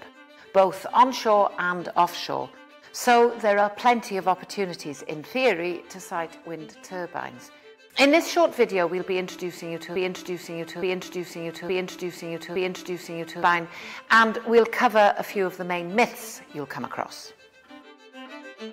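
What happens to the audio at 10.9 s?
At 10.9 s the audio is stuck in a broken-record loop running from 9.96 to 13.43 s: a 0.87 s fragment plays four times back to back, identical each pass, and whatever should have played in that stretch is missing. The likely cause is a stalled player, encoder or stream resending the last fragment it held. On a waveform or spectrogram the same 0.87 s block tiles four times exactly, with abrupt seams at each repeat.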